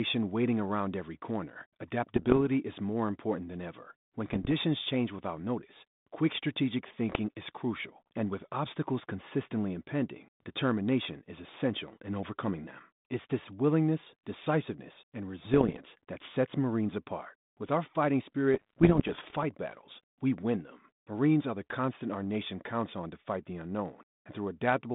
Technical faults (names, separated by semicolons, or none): bit errors on an ADPCM link